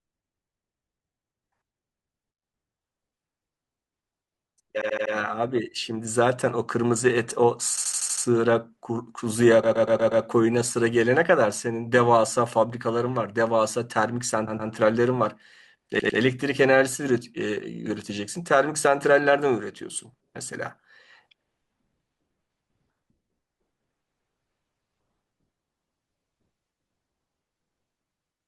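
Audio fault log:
4.81–5.13, 7.77–8.25, 9.63–10.23, 14.47–14.71 and 15.99–16.19 s, repeated frames: a short stretch of compressed audio is decoded again and again, so the sound stutters in loops of 80 ms (first two), 120 ms (next two) and 100 ms (last), replayed 4, 6, 5, 2 and 2 times. On a spectrogram this appears as identical tiles in a row, and on the waveform as copied segments. Together they add about 1.8 s.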